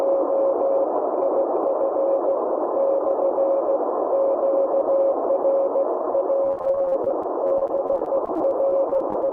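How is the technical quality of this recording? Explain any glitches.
From about 6.44 s to 9.29 s there's repeated packet loss, giving that robotic sound. Dozens of short dropouts, none longer than 32 ms, get patched by stretching the preceding sound, so roughly a quarter of that stretch is filler. It comes across choppy and robotic, with bits missing.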